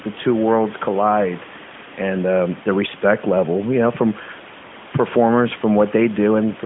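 No technical faults can be heard anywhere in this speech clip.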